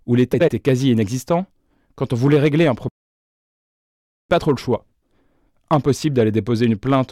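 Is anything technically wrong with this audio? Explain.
Yes. Three faults can be heard.

Hard clipping runs through the whole recording. The speech is driven about 4 dB past what the signal path can carry, so the loudest peaks are sliced flat. Only a small share of the samples goes over, around one or two percent. Those flattened tops add harmonics high in the spectrum. The result is a brittle crackle on the stronger syllables, rather than a constant fuzz.

Frames out of order occur from 0.33 to 0.49 s. Two neighbouring blocks of about 70 ms each play in swapped order. That length suggests runs of three decoder frames. For about 0.16 s the speech is scrambled into a short flutter. Nothing is lost or added, so the timing afterwards is unaffected.

A playback stall starts at 2.89 s and lasts until 4.30 s. The sound cuts out mid-flow for about 1.41 s, then resumes. The likely cause is that the player ran short of data or its output thread was held up. 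It then fed silence until it caught up. The break is abrupt at both edges. It reads as a dropout rather than a natural pause.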